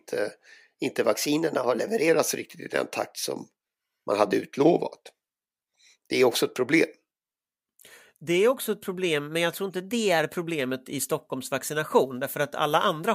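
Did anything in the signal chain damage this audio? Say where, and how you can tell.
Yes, at the buffer stage: three drift correction steps. The speech speeds up 6.28% and rises a semitone from 1.15 to 2.09 s, before "riktigt i den takt", then slows 6.28% and drops 112 cents from 4.60 to 5.74 s, after "takt som man hade", then jumps up again from 9.60 to 10.20 s. Each step snaps back, likely a clock-matching resampler correcting buffer level.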